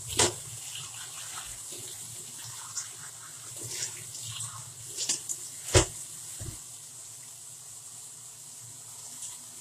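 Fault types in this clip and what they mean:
Transcoding between lossy codecs: Two different coding artefacts are heard together throughout, with nothing above 14.9 kHz. The likely cause is a low-rate HE-AAC encode re-encoded as Vorbis, where the second codec spends bits on the first codec's smearing and adds its own.
Chunks out of order: Around 9.23 to 9.26 s a brief stretch is jumbled. A segment roughly 10 ms long plays two segments late, after audio that should follow it, leaving three hard joins.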